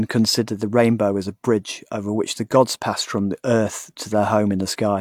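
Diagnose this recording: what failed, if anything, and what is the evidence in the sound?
Nothing failed; no stage shows any audible fault.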